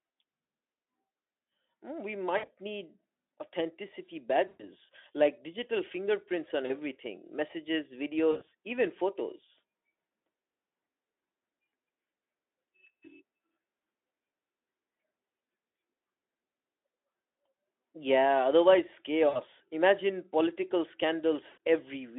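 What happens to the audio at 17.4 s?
Nothing goes wrong at 17.4 s; the speech there carries on intact, with only the light Speex coding and narrow telephone-style band that run through the whole recording.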